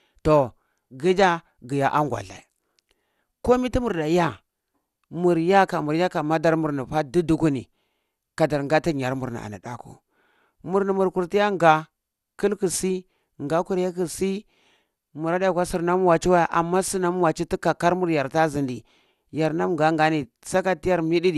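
Throughout the speech, nothing is present above 12.2 kHz, and the top end sounds dull, with a gurgling, granular roughness. The likely cause is MP2 compression at a low rate, fitting about 80 kbps, where starved upper sub-bands switch off and remaining bands are coarsely quantised.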